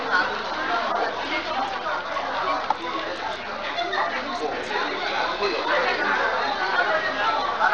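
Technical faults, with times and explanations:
Throughout, Bluetooth SBC compression: the audio was likely carried over a Bluetooth link using the SBC codec at a starved bit budget, the kind of damage that fits a rate near 80 kbps. With so few bits shared across its wide sub-bands, the weak upper bands are left empty or nearly so and the rest are coarsely quantised, so the treble thins and flickers in and out while a gritty, grainy noise with aliased edges clings plainly to the sound.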